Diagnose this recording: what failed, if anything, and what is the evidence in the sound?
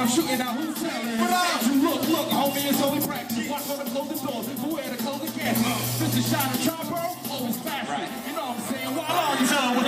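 The level abruptly falls by about 6 dB from 0.42 to 1.19 s, 3.05 to 5.45 s and 6.69 to 9.09 s, then snaps back. This is one channel drops out, likely an intermittent stereo connection in the analogue wiring, which halves the mono sum.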